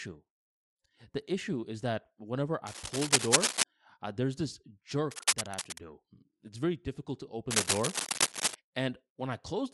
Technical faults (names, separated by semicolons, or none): Bluetooth LC3 compression; cable scratch noise